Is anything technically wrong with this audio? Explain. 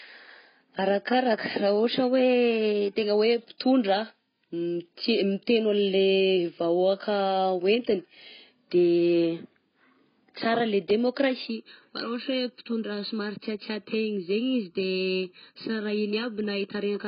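Yes, there are two faults in this speech clip. Throughout, there is AAC compression damage, likely caused by encoding with AAC-LC at a very low bitrate, around 16 kbps. With so few bits, the encoder discards the upper spectrum and coarsely quantises what remains. Nothing is left above about 5.1 kHz. The speech sounds dull and muffled, and sibilants and sustained vowels take on a smeared, warbling, fizzy texture.

From 11.47 s to the end, there is channel delay causing comb filtering. One channel arrives late by about 0.7 ms, and when the two channels are combined to mono, the shared content cancels at regularly spaced frequencies. The first notch falls around 700 Hz, with further ones at odd multiples above it. This section sounds hollow and phasey, as if the audio suddenly passed through a tube.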